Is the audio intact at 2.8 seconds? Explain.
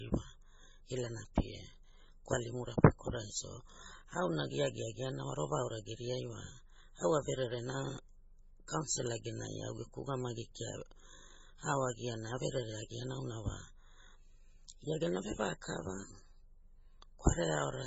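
No. At 2.83 s there is a pre-echo: the codec spread quantisation noise across a whole transform block, so noise meant for a sharp attack late in that block leaked into the quiet moment just before it. You hear a brief hiss of about 10 ms ahead of the attack, which then sounds soft and smeared.

That happens within speech that is likely heavily damaged by MP3 compression. Starved of bits, the encoder cut everything above 7.6 kHz and dropped weak frequency lines from frame to frame, which fits a bitrate around 16 kbps. The result sounds dull, watery and swirly, with chirpy s sounds.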